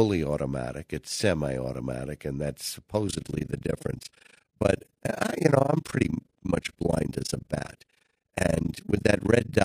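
Overlap-add ripple sets in at 3.08 s, right after "and that's", and continues to the end of the clip. The audio was split into windowed frames and rejoined with an overlap whose windows fail to add up to a steady gain, so the level dips and recovers once per frame. Here the dips are very deep, about 60 dB, repeating at roughly thirty times a second, which gives the speech a harsh, chopped flutter.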